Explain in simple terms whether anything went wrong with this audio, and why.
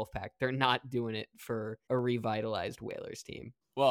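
Two quick clicks pop out of the speech, one at 1.99 s and another at 2.91 s. Each is a single sharp tick. The likely cause is dropped samples: a tiny sliver of the recording, a small fraction of a millisecond, went missing, so the sound jumps abruptly from one point to a slightly later one. That gap is far too short to lose anything you'd notice, but the sudden jump comes through as a click.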